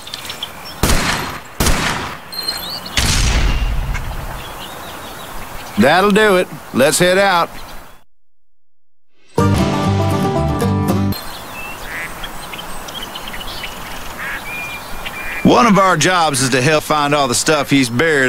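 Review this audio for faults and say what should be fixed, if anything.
Damaged data in a compressed stream shows up as brief glitches at 5.55, 9.55, 11.12 and 12.98 s. At each point the decoder hits corrupted bytes, misreads or discards those frames and has to resync on the next valid frame header, producing a short chirp or blip. On a waveform each appears as an abrupt discontinuity; a spectrogram shows a thin vertical smear of broadband or tonal energy. Fix this by re-fetching the stream over a checksummed or error-corrected transport.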